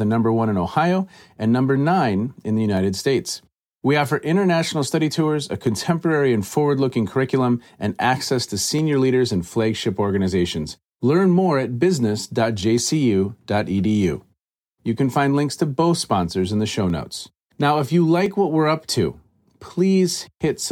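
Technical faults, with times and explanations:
2.77, 5.67, 8.79, 12.78, 16.90 and 18.26 s: dropped samples. Six sharp isolated clicks, likely a sliver well under a millisecond going missing, so the waveform jumps abruptly.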